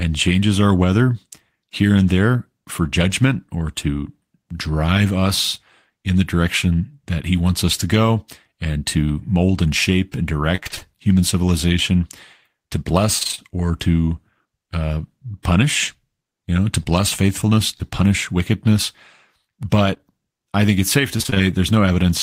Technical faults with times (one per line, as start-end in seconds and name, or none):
10.55-10.83 repeated packet loss (robotic sound)
13.19-13.50 repeated packet loss (robotic sound)
17.77-17.82 short concealed packet loss
19.94-20.13 short concealed packet loss
21.18-21.38 repeated packet loss (robotic sound)